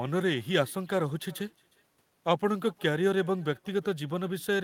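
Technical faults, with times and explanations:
Throughout, echo with no canceller: the far end plays the call over a loudspeaker and its microphone feeds it straight back unremoved, so every phrase of speech returns around 400 ms later as a faint, thin shadow about 28 dB below the talker.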